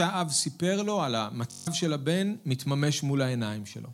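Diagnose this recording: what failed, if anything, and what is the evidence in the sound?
The wireless link dropped out here, a classic Bluetooth stutter. From 1.51 to 1.68 s the speech breaks into a rapid, buzzy repetition as the receiver keeps replaying its last short buffer while it waits for packets that arrive late or never. When audio resumes it has jumped ahead, with roughly 150 ms of speech simply gone, which fits about seven lost frames. The stage is transport over the wireless connection, not the recording chain itself.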